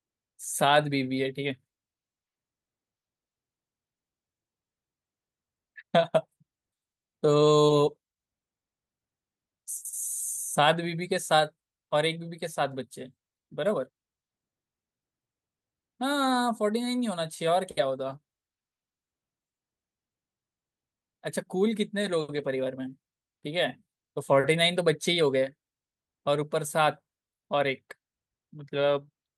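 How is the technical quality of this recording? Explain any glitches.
No technical faults are audible.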